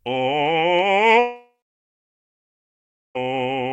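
Likely a long network dropout, 1.19–3.17 s: with no audio arriving, the music's last sound fades as a buzz or hiss, leaving 1.65 s of silence.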